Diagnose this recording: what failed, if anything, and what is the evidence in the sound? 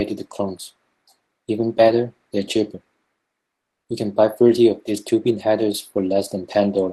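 At the network and jitter-buffer stage, a call audio freeze runs from 3.61 to 3.87 s. The sound stops dead for about 0.23 s and then carries on from exactly where it left off, with nothing cut out. The likely cause is packets held up in transit, letting the jitter buffer run dry. The receiver filled the wait with silence, so the gap adds 230 ms of delay to everything after it. The band limit near 12 kHz from the 20 kbps Opus call path is present throughout.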